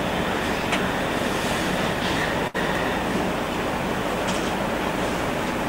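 At about 2.47 s there's a burst of packet loss running to 2.56 s. The receiver papered over the gap by stretching and fading the last bit of sound for around 67 ms, then jumped ahead, so roughly 60 ms of audio simply never arrives.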